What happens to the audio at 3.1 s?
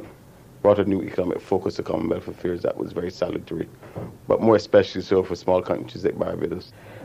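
Nothing goes wrong at 3.1 s; the audio plays through that moment intact, with no dropout, click, glitch or other fault.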